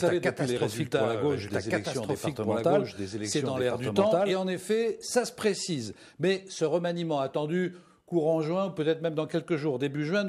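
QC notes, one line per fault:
0.00–4.38 s, doubled audio track. A dry, equally loud copy runs about 1.5 s behind from the start, then stops abruptly. Likely a slower second capture path.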